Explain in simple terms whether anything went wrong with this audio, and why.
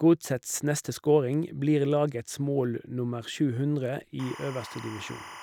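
From 4.19 s to the end of the clip, a steady chirping warble sits quieter than the speech. This is timecode bleed: a timing signal, flipping between tones around 1 kHz and 2 kHz at 25 frames per second, leaked in from a neighbouring track or cable.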